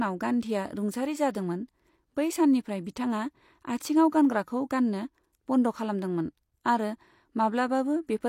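Pre-echo at 1.33 s, right after "गान्धीया रुंसारि": a transform codec spread quantisation noise across its block, so noise meant for a sharp attack leaked into the quiet just before it. A short hiss of about 14 ms precedes the onset, blurring its edge.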